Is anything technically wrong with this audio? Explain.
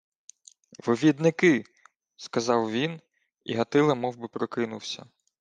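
No, nothing technically wrong here.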